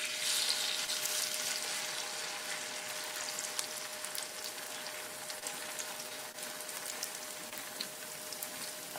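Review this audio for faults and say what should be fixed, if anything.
Short concealed packet loss occurs at 0.85–0.89, 5.39–5.44, 6.32–6.36 and 7.50–7.53 s. Each time, about 20 ms of audio missed the decoder. The receiver extended the preceding sound over the gap, then blended back. This leaves a brief smear or wobble. A larger jitter buffer or forward error correction on the link would prevent it.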